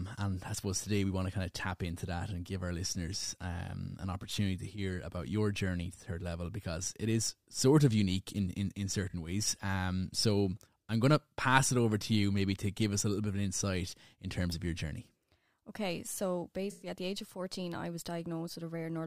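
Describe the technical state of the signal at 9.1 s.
At 9.09 to 9.14 s, just after "unique in in in", AAC frame loss with concealment: roughly 43 ms of data went missing, consistent with two lost frames, and the decoder rebuilt the gap from the last good spectrum, leaving a brief smeared, noisy, phasey patch in the speech.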